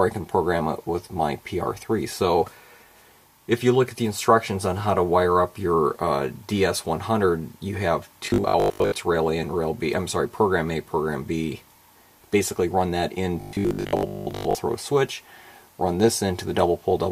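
From 8.26 to 8.98 s and again from 13.41 to 14.55 s, the sound turns into a rigid metallic buzz at 50 Hz: robotic sound from repeated short buffers. Audio is likely arriving too slowly, so the same 20 ms chunk is replayed in place of most of the real signal. On a spectrogram, both spans show evenly spaced horizontal lines every 50 Hz. The waveform shows identical 20 ms cycles repeating back to back.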